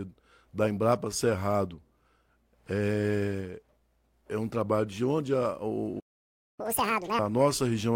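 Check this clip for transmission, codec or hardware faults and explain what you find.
Two playback faults occur back to back near the end of the speech: a stall followed by a burst of fast catch-up.

Playback stall, 5.99 to 6.60 s: the speech cuts out mid-flow and the output goes silent for about 0.59 s. The likely cause is the player's buffer running dry or its output thread being blocked, so no samples reached the device until it recovered. Playback then resumes rather than skipping ahead, leaving the stream behind schedule.

Catch-up at higher speed, 6.60 to 7.19 s: to recover the lost time, the player resamples its backlog and plays it at 2.0 times normal speed for roughly 0.6 s. Because this is plain resampling rather than time-stretching, pitch rises with speed, by around ten semitones, so the speech sounds hurried and chipmunk-like. At 7.19 s the rate drops back and speed and pitch return to normal.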